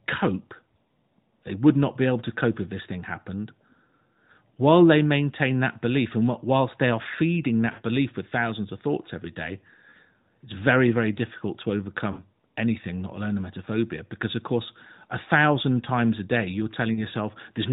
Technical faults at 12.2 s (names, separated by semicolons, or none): lost AMR speech frames